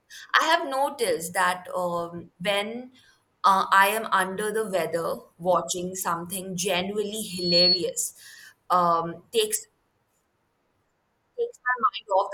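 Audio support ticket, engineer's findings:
Rising 4.4 kHz whistle swelling into a squeal, 7.29–7.85 s, just after "watching something genuinely". Builds over about a third of a second to a few dB above the speech. Loudspeaker feedback squeal: mic hearing its own speaker, loop gain above one at that frequency.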